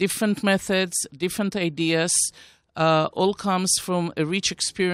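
No technical faults are audible.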